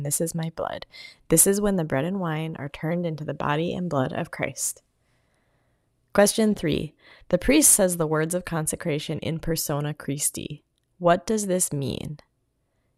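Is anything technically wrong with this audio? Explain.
Yes. From 0 to 8.33 s there is sample clock jitter: converter timing wanders by roughly 1.5 microseconds, so a hiss-like roughness about 25 dB down tracks loud, bright speech. Unlike a steady noise floor, it vanishes in pauses.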